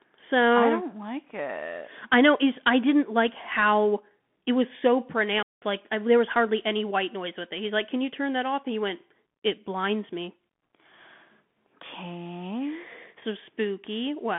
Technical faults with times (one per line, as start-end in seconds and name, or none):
0.00-14.39 Bluetooth CVSD headset codec
5.39-5.65 intermittent contact